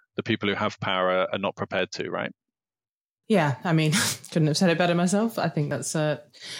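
Small jumps ahead in the speech at 0.93 s, 1.79 s and 5.71 s, likely dropped buffers (overrun), each losing roughly 10 to 20 ms.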